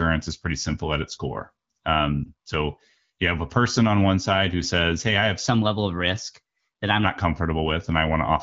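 Speech carried over the AMR wideband (HD Voice) codec, its light coding texture consistent with the 12.65 kbit/s mode, has two faults. At 2.24 to 2.31 s, just before "so you have a", a lost AMR speech frame, about 20 ms of audio, causes a brief dip or warble as the decoder bridges the gap by reusing the last good pitch and vocal tract settings at reduced gain. Because the sound is smoothed over rather than simply cut, it is not a hard dropout to silence or a click. From 5.47 to 7.04 s, right after "I have", a section plays at the wrong speed, 1.15 times too fast and roughly two semitones high. The speech sounds hurried as well as raised, so this is a speed error and not a pitch shift alone, likely from a player or editor running on the wrong clock.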